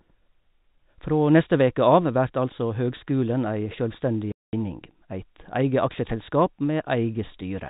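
Telephone-band speech, capped near 4 kHz by G.711 coding, drops to dead silence with hard edges from 4.32 to 4.53 s, right after "altså høgskulen ei sjølvstendig": packet loss filled with silence, a 210 ms hole that fits seven 30 ms packets.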